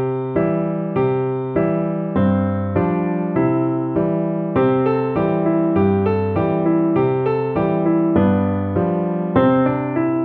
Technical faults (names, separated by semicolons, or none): none